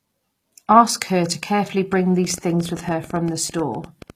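From the start the treble has that gritty, metallic edge, with s sounds going lispy. It's likely HE-AAC compression: the codec keeps only the lower band and fakes the top by copying it upward, and the damage here fits a low bitrate around 24 kbps.

Right after "her to carefully", at 1.93 s, a train of clicks kicks in and runs to 4.11 s: about twenty similar pops at an uneven pace, roughly ten a second, hitting about as loud as the sound itself. Likely interference or a faulty connection injecting pulses.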